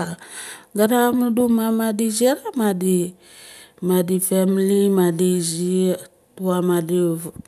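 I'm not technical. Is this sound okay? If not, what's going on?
Yes, the recording is technically sound, with no faults to be heard anywhere in the audio.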